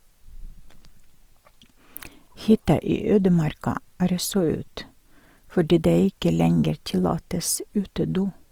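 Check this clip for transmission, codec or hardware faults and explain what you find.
One codec fault runs through the whole clip. Throughout, the speech sounds grainy and rough but keeps fullband reach to about 20.3 kHz. The likely cause is Opus compression noise-filling starved bands rather than leaving MP3's swirling holes, which fits a rate near 24 kbps.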